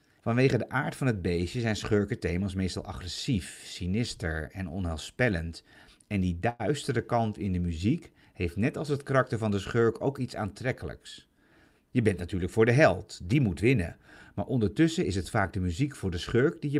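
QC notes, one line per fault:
6.49–6.61 s, call audio freeze: just before "kant in de muziek" the speech stalls, and the last sound is drawn out for about 100 ms as a short buzz or hiss that fades before the talker picks up exactly where they left off. Nothing is lost. The flow is simply interrupted. This is likely a jitter buffer running dry while packets were delayed in transit, so the gap is inserted rather than cut, pushing everything after it about 100 ms later.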